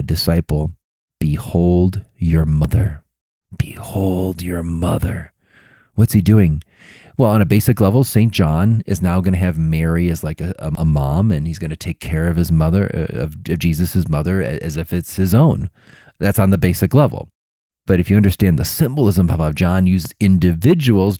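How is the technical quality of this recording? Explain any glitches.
The speech has three abrupt jumps, at 2.65 s, 10.75 s and 20.05 s. At 10.75 s the jump falls between "as like a a" and "a mom and he's". Each is a point where the sound leaps forward with no gap, skipping roughly a tenth of a second. The likely cause is a dropped buffer (overrun): incoming audio was overwritten before it was read, and the surrounding audio was spliced together. The light Opus voice compression can also be heard throughout.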